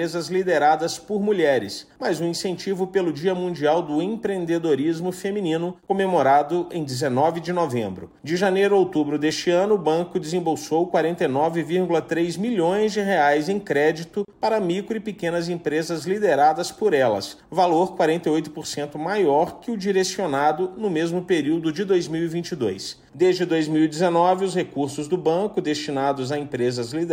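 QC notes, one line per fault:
14.25–14.28 s, gap at a join of encoded pieces: a 33 ms hole of silence opens in otherwise continuous sound, its edges smeared by the codec. Two separately encoded pieces were butted together without trimming the encoder's start delay and end padding.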